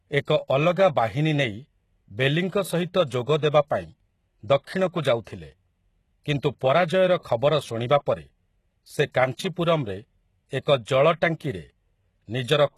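From start to finish the treble has a synthetic, gritty quality: s sounds come out lispy and metallic, and nothing is present above 12.3 kHz. The likely cause is HE-AAC compression. The codec carries only the lower spectrum and rebuilds the treble by copying lower bands upward under a coarse envelope, so the upper harmonics no longer line up with the real ones. The damage is plainly audible, which fits a very low bitrate near 16 kbps.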